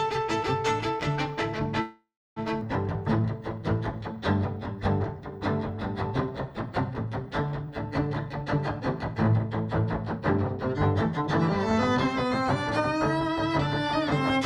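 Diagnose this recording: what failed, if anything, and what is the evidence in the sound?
The network stage failed, and the receiver's jitter buffer concealed it. At 1.81 s the sound stops and is stretched by about 550 ms until 2.39 s. For roughly 310 ms of that stretch there is silence. Nothing is lost: playback resumes exactly where it halted. This is a call audio freeze, likely caused by packets held up in transit while the jitter buffer ran dry. The added wait raised the delay by 550 ms.

Soon after, at 2.60 to 2.64 s, the audio jumps forward. Only a 9 ms fill joins the two sides. About 0.4 s of audio is simply gone. This is a skip ahead. A stretch was dropped while later audio was already waiting. That cut roughly 0.4 s of latency, undoing much of the stall.

From 3.20 to 5.39 s and again from 6.26 to 8.31 s, the sound runs at 93% speed. Pitch stays the same, but sounds are drawn out. 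This is jitter buffer slow-down. The buffer was short of reserve, so the receiver repeated single pitch periods and pause fragments many times in a row. That added 156 ms and 159 ms respectively.

Then the buffer overshot its target. From 8.43 to 9.52 s the sound runs at 108% speed, losing about a tenth of a second. From 10.19 to 14.40 s it runs at 106%, losing about 0.3 s. Pitch holds steady, and the pace feels hurried. This is jitter buffer speed-up. Short pieces of one or a few pitch periods were removed repeatedly to bring the delay back down.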